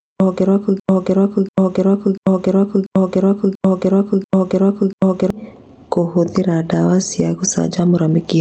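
From the first moment, the level pumps up and down, a breathing, gain pumping effect with a swing of around 10 dB. Loud and quiet syllables sit unnaturally close in level, so the speech sounds squashed. The likely cause is a microphone gain set far too high, with a fast limiter or compressor clamping down on each loud moment and letting go in the gaps.

At 0.80 s the speech gets stuck: a fragment about 0.69 s long plays over and over, back to back, seven times, until the loop breaks at 5.30 s. This broken-record loop replaces whatever should have been heard during those four and a half seconds, which is simply gone. It most likely comes from a player, encoder or stream that stalled and kept resending the last chunk it held. Throughout, the call path's Opus coding limits the top end to about 8 kHz.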